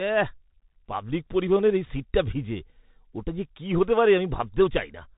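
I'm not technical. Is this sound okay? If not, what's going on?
No, it isn't. The whole clip has gone through a Bluetooth CVSD headset codec, the old phone-call link headsets use. Everything above about 3.8 kHz is gone, so the speech sounds muffled and boxy, s sounds come out scratchy, and a grainy hiss sits underneath throughout.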